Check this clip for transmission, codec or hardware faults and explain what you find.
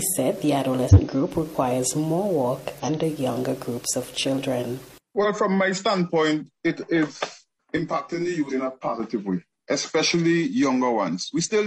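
Two kinds of fault are present. Compressed frames are skipped at 0.89 s and 2.79 s. Whole frames never reach the output, so the audio leaps forward by about 150 ms each time.

Channel delay with comb filtering runs from 7.77 s to 9.00 s. One channel lags the other by roughly 20 ms before the two are folded to mono. Shared content cancels at evenly spaced frequencies from around 30 Hz upward, which makes the sound rough or slightly doubled.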